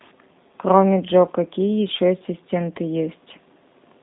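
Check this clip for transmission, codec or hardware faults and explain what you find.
The G.729 codec is audible throughout the speech. It rebuilds each 10 ms frame from a vocal tract filter, pitch predictor and a few pulses, consistent with an 8 kbit/s stream. The result is rough, slightly synthetic speech. A spectrogram shows energy confined to roughly 200 Hz to 3.7 kHz, with nothing above 3.8 kHz.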